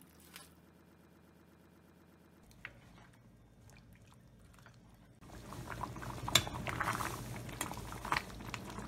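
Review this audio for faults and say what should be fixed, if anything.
A broken-record loop runs from 0.74 to 2.43 s. A 121 ms fragment repeats exactly 14 times back to back, and the audio that belonged there is lost. The likely cause is a stall that kept resending the last held fragment. A waveform shows identical blocks tiling the span, and a spectrogram shows a striped pattern repeating about eight times per second.

Underrun detection in the player or stream path should resync or mute rather than replay stale data.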